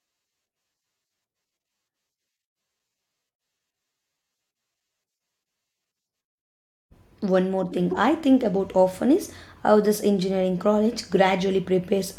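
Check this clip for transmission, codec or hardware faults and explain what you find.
One transmission fault: a gap between stream segments at 2.79 s in this speech clip. The timestamps of two consecutive stream segments fail to line up, leaving an empty stretch of about 3.9 ms that the player pads with digital silence. Nothing is dropped; the sound is simply pushed later by that amount. The result is a brief, hard-edged dropout, heard where the sound cuts out and resumes abruptly.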